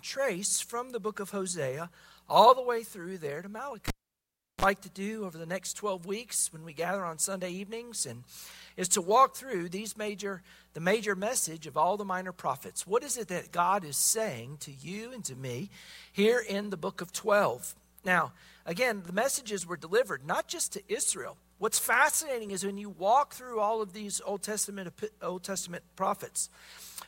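At 3.88 s a cable is pulled and plugged in: a pop marks the connection breaking, then the sound falls to near silence for about 720 ms. As the plug goes back in, a brief burst of 60 Hz mains buzz, about 39 ms, comes through while only the tip makes contact, and a second pop at 4.65 s brings the audio back. That buzz and the paired pops separate it from a plain digital dropout, which cuts cleanly with no hum.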